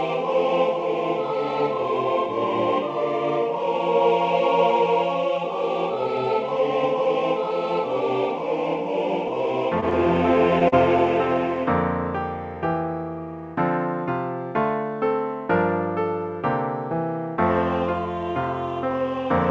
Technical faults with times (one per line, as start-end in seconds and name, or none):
9.80-9.85 short stall from a late packet
10.68-10.75 short concealed packet loss